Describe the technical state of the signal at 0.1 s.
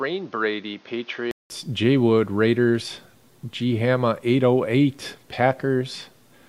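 At 0.1 s the recording is in a stretch, from 0.0 to 1.5 s, where the input has likely been switched to a poorer device, a different capture path with its own limits. Nothing reaches above 6.6 kHz, so the sound is dull and boxy. It sits a few decibels quieter, with a new background noise roughly 30 dB below it. At the 1.5 s switch a gap of 188 ms of silence is heard.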